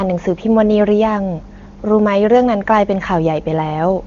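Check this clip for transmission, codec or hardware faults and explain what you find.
No transmission, codec or hardware faults turn up in this clip.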